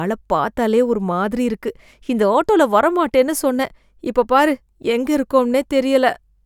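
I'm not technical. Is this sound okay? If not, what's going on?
Yes, this speech recording sounds fine, with nothing going wrong in it. There's nothing here that needs fixing.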